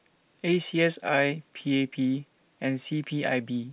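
Speech carried over a WebRTC call path shows no technical faults, and its band stopping at 4 kHz fits narrowband G.711 A-law coding at 64 kbps.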